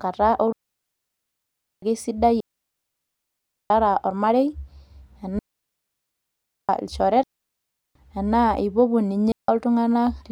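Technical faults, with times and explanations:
0.52–1.82 s, 2.40–3.70 s, 5.39–6.69 s, 7.23–7.95 s, 9.32–9.49 s: digital wireless dropout. The speech cuts to near silence for 1.3 s three times, then 0.72 s and 0.17 s, as the receiver mutes on lost data with a very short fade and no noise burst either side.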